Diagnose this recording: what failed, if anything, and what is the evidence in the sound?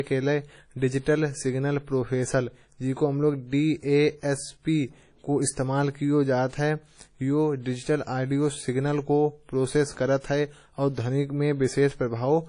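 The failure sits at the codec stage: the speech carries plainly audible WMA compression damage from start to finish, most likely from a low-bitrate encode around 32 kbps. Nothing remains above 10.1 kHz, and the consonants ring and smear while a washy hiss rises and falls with the speech.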